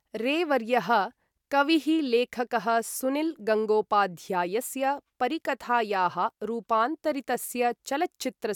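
No technical faults can be heard anywhere in the recording.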